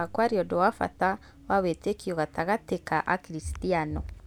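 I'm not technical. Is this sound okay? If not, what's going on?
Yes, listening through this recording, nothing stood out as a problem.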